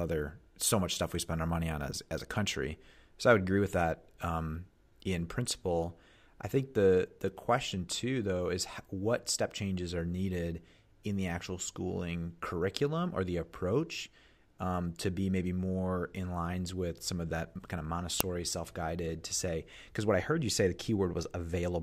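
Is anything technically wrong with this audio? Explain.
Yes. At 18.20 s, between "of that kind of" and "self guided to say", an uninitialised buffer plays stale memory as a 0.73 ms loud crack, which fits a 32-sample block.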